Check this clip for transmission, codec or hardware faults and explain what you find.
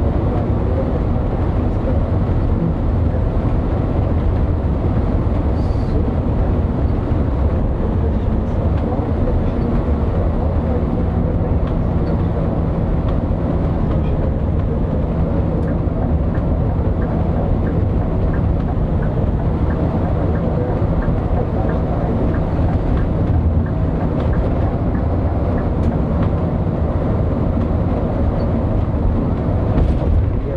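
Two drift correction steps occur. Clock-matching software likely jumped the playback rate to rebalance its buffer. From 13.81 to 15.07 s the sound slows 6.43% and drops 115 cents; from 24.45 to 25.68 s it speeds up 6.43% and rises 108 cents, each snapping back afterwards.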